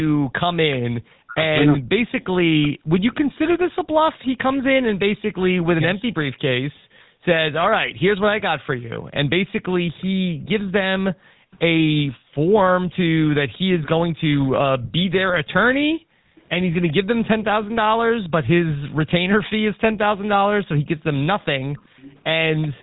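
GSM full-rate codec damage runs through the whole recording. At 13 kbps the codec rebuilds the voice from a vocal-tract model driven by sparse, regularly spaced pulses, and it passes nothing above about 3.9 kHz. The speech is band-limited and plainly buzzy and gravelly throughout.

An echo leak appears from 0.71 to 3.38 s, returns from 13.83 to 16.93 s and again from 21.78 to 22.67 s. A faint copy of the far talker trails by 381 ms, at about 20 dB below the speech (about 25 dB below in the last stretch). Its likely cause is an echo canceller on a speakerphone leaving part of its own loudspeaker output in the microphone signal.

Speech suppressed in double talk occurs between 1.26 and 2.14 s, overlapping the first echo. The talker's voice dips by as much as roughly 40 dB, in pieces adding up to about 0.7 s. This is likely an echo canceller that could not separate the two talkers and turned everything down.

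Background gated by the echo canceller appears intermittently from 2.69 to 19.75 s and again from 21.81 s to the end at 22.82 s. The room sound drops by about 40 dB while the loudspeaker is active, for about 4 s in total across the first span and about 0.4 s in the second, then returns.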